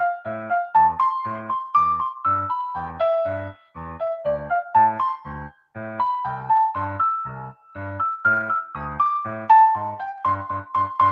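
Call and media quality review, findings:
Sound cut by the noise suppressor at 3.54–3.77 s and 5.51–5.76 s. Content misclassified as noise, pulled down about 17 dB and about 18 dB. Waveform: envelope abruptly pinched, roughly a fifth of a second each. Spectrogram: energy sharply thinned.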